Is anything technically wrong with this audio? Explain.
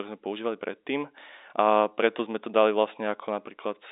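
No, nothing is technically wrong: this is speech carried over G.711 A-law telephone coding at 64 kbps, and the band limit of roughly 300 Hz to 3.7 kHz is simply what that line format passes.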